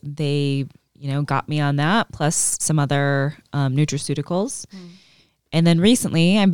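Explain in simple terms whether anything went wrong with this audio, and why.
Nothing went wrong that I could hear: listening to the whole speech recording, nothing stood out as a problem.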